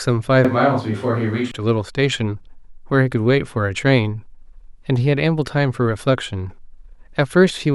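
From 0.45 s to 1.51 s the speech abruptly turns roomy and hollow, with the bass thinned out, then snaps back just as suddenly. This is a switch to a distant microphone, likely because the close microphone's signal dropped out and a farther pickup took over. Loudness stays roughly the same, but room noise sits at about 35 dB below the speech. On a spectrogram the low end thins, reverberant tails smear each syllable, and a raised noise floor fills the gaps. The waveform shows less defined envelopes.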